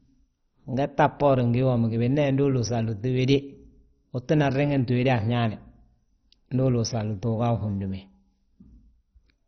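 Speech runs dull and gurgling throughout, with nothing above 6.1 kHz and a coarse, granular grain, the heavy damage of likely MP2 compression at a rate fitting about 32 kbps. Unlike a plain low-pass filter, the upper sub-bands flicker on and off instead of rolling off smoothly.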